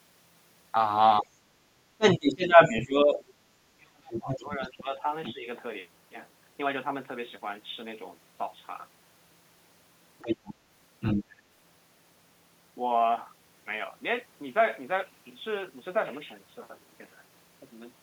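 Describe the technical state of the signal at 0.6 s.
At 0.6 s the signal is intact, with no audible fault in the audio at that moment.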